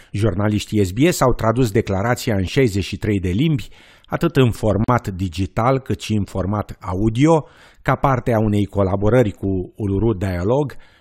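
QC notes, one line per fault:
4.84–4.88 s, gap at a join of encoded pieces: between "de limbi atât în" and "digital cât și în" the speech drops into a 42 ms silence where separately encoded segments meet, with encoder start delay and last-frame padding left in. The waveform shows a flat notch with abrupt, slightly smeared edges; the spectrogram shows a narrow empty vertical band before the speech resumes where it stopped.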